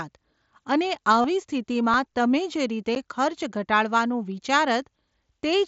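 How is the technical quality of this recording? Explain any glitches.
The recording has three short glitches: one concealed dropout from the Bluetooth link and two blocks of digital silence. The speech comes through the mSBC headset codec, which limits the band to 8 kHz and adds a light grain on louder syllables.

Concealed Bluetooth headset packet loss occurs from 1.22 to 1.24 s and lasts 22.5 ms, which fits a run of about three lost frames. When voice packets from the headset fail to arrive, the phone patches the gap by repeating the stretch of the preceding waveform that best matches, taken from roughly the last 20 ms. Because several packets are lost in a row, the patch holds a brief buzzy tone at full level instead of a natural syllable, followed by a slight warble as real audio resumes.

Blocks of digital silence occur at 1.94 s, lasting 2.33 ms, and at 2.95 s, lasting 10 ms, just after "જે રીતે". 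In each case a run of samples was output as zeros, which fits an output buffer that was not filled in time. The signal cuts out and returns with no fade. The 1.94 s event is heard as a tick, and the 10 ms block at 2.95 s is also heard as a tick or dip rather than a hole in the sound.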